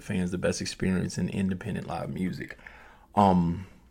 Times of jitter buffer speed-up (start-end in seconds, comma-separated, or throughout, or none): none